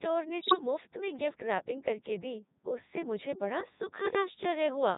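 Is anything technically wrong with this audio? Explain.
Yes, two things. The whole clip sounds like speech run through the Codec 2 vocoder, and the heavy buzz fits its 3.2 kbit/s mode. It sends only pitch, voicing, energy and a spectral envelope, and the decoder rebuilds the voice from sine waves. So it comes out robotic and buzzy throughout.

From 0.40 to 0.61 s there's a burst of bit errors on digital voice radio, which fits roughly nine frames hit at a bit error rate of around 7 percent. Each flipped bit scrambles that frame's pitch, level or spectrum, so the sound lurches into warbles and robotic gibberish.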